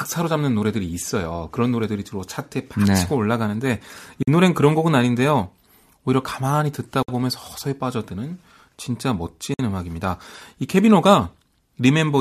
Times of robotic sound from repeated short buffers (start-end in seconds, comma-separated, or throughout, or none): none